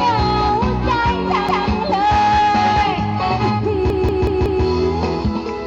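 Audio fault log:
1.49–1.67 s, repeated buffer: a roughly 186 ms block plays twice, a short stutter; the spectrogram shows identical adjacent patterns split by a hard vertical edge.
3.90–4.64 s, repeated buffer: the same-length block sounds five times in a row, fitting an 8192-sample buffer; the waveform shows copies with abrupt joins.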